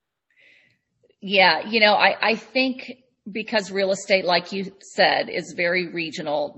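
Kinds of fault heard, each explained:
Adaptive stream at a lower bitrate: at 0.83 s the speech abruptly turns swirly with codec artefacts, with no gap, as playback falls back to a cheaper encoding, consistent with MP3 dropping from 128 to 32 kbit/s. A spectrogram shows a sudden change in texture lasting until the end, while the waveform stays continuous.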